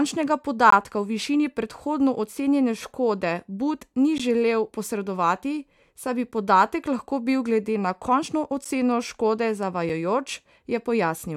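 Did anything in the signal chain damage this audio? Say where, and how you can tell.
Yes. The damage is at the driver or buffer stage. Five blocks of digital silence cut into the speech, at 0.70, 4.18, 7.11, 8.65 and 9.89 s. The one at 7.11 s falls just before "bil glede". Each gap is short: about 20, 15, 5, 10 and 5 ms. The signal drops straight to silence and back with no fade, so each one is heard as a tick, a pop or a short hole depending on its length. The lengths are all multiples of 5 ms, which points to buffers that were not filled in time.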